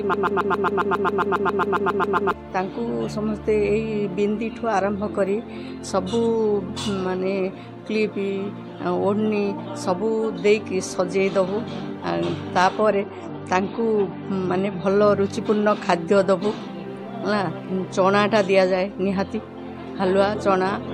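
From the very first moment until 2.33 s, the audio is stuck in a broken-record loop: a fragment of about 136 ms repeats back to back, sixteen times, and is already cycling when the clip begins. The likely cause is a stalled player, encoder or stream resending the last piece it held, so whatever should have played in those seconds is gone. On a waveform the stretch appears as one identical shape tiled end to end, and a spectrogram shows the same short pattern stamped repeatedly at an even spacing.

From 12.90 s to 14.90 s the quality drops suddenly, with no gap, as an adaptive stream at a lower bitrate takes over. The treble disappears entirely above 10.6 kHz, and the remaining sound picks up the smeared, watery texture of heavier compression, which points to a far leaner encoding than the surrounding audio. On a spectrogram the upper band goes dark for exactly those two seconds, with a sharp horizontal ceiling, and then snaps back. 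The waveform shows no break at either edge.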